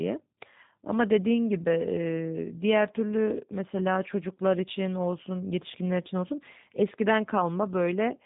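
From start to finish the speech carries G.729 codec damage, plainly audible, with a character that fits the G.729A variant at 8 kbit/s. Each 10 ms frame is rebuilt from a vocal tract filter, a pitch predictor and a few pulses rather than the original waveform, so the voice sounds rough, buzzy and slightly synthetic. On a spectrogram, energy stops abruptly near 3.8 kHz, and harmonics look smeared and grainy beneath that ceiling.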